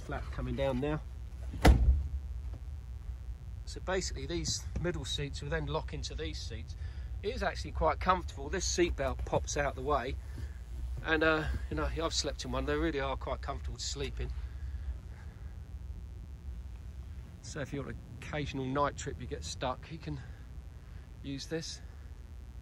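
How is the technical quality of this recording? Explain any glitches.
The recording carries one fault, present from start to finish: mains buzz. Switching spikes from a 60 Hz supply leak in twice per cycle, spraying harmonics up into the kilohertz range. The result is a steady, raspy buzz sitting roughly 30 dB below the wanted sound.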